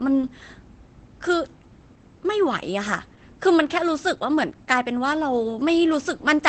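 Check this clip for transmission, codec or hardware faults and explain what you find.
One codec fault runs through the whole speech clip. Opus voice compression: the speech sounds muffled and hoarse, with a faint robotic edge and nothing above about 8.7 kHz. This points to Opus in its SILK linear-prediction mode at wideband, with a coarsely coded excitation signal that fits a bitrate near 12 kbps.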